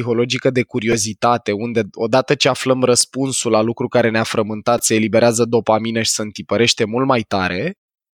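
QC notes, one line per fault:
0.92 s, 3.01 s and 4.78 s, repeated buffer: brief clicky buzzes just before "unde odată ce aflăm", between "unde odată ce aflăm" and "la lucru care", and before "se eliberează dopamină și". New audio arrived late, so the last 2.9 ms piece, which fits a 128-sample buffer, replayed three, one and four extra times, losing roughly 10, 3 and 10 ms.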